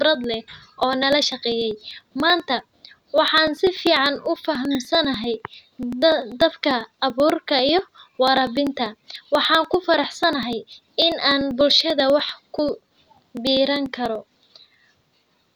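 From 0.15 to 15.43 s, periodic USB or driver dropouts recur every 0.098 s, each skipping about 2 ms of audio, heard as steady ticks during speech.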